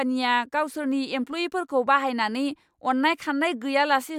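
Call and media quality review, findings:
Nothing stood out on listening to this speech recording.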